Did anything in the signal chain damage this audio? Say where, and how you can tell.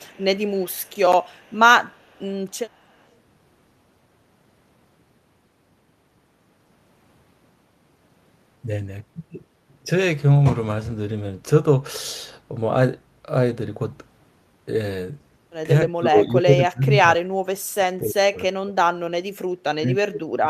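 Yes. At the call-processing stage, an echo canceller likely left residue, causing echo leak: a faint copy, roughly 30 to 40 dB down, trails 268 ms behind at 0.0–0.99, 1.22–1.56, 1.86–2.34 and 2.51–3.07 s.

Also in call processing: speech suppressed in double talk from 15.87 s to the end. The canceller likely mistook its own talker for echo during overlap, so the level dips, dropping around 30 dB at worst.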